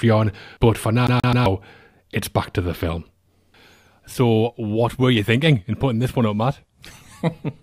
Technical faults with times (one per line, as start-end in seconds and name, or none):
1.07-1.46 CD stuck on one turn
4.14 gap between stream segments